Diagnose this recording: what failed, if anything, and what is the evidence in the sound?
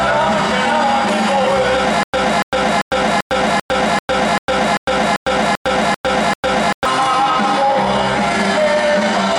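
A stutter with silent gaps runs from 2.03 to 6.85 s: the same 288 ms burst repeats twelve times, each followed by about 104 ms of digital silence, on an even 391 ms cycle. The likely cause is a stalled player or stream replaying its last fragment at each retry, so the sound meant for that span is lost. The exact repeats and true silence set it apart from random dropouts.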